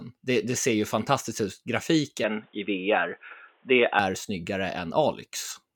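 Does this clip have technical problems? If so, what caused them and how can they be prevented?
Yes. From 2.24 to 3.99 s the speech turns dull and boxy, with nothing above 3.8 kHz, a level shift of about 5 dB and a faint new background noise, then clears again. This likely comes from the input switching to a poorer device. Locking the recording to one microphone and disabling automatic device switching prevents it.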